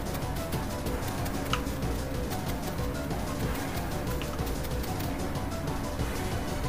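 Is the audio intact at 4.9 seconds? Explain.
Yes, the audio at 4.9 seconds is intact, with no dropout, glitch or other fault to be heard at that moment.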